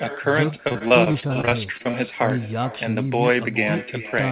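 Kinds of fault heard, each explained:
Echo with no canceller: The far end plays the call through a loudspeaker, its microphone picks that playback up again, and no echo canceller strips it out, so the signal returns after a full network round trip. Throughout this clip the talker's speech is trailed by a weaker, thinner copy arriving roughly 400 ms later and sitting about 15 dB below the original, which leaves a constant ghost behind the speech.
Repeated packet loss (robotic sound): Between 0.68 and 1.96 s the network keeps dropping or delaying packets, and each hole is bridged by stretching the last received sound before the next loss arrives. The gaps are short, the longest about 26 ms, but they come in quick succession, and roughly a quarter of that stretch is concealed rather than real audio. The speech there turns choppy, with small pieces missing.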